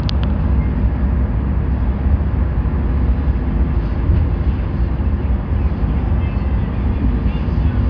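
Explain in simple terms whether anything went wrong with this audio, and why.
Nothing went wrong here; the audio comes through just as it should, with no glitches, drops or odd noises to point to anywhere along the way.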